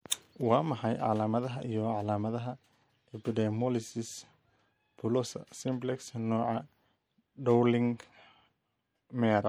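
MP3 compression damage runs through the whole speech clip, from start to finish, and is plainly audible. The likely cause is an MP3 encoder starved of bits, which fits a rate of about 64 kbps. With so little to spend, quieter frequency lines are dropped and restored from frame to frame, which gives the sound a watery, swirling texture.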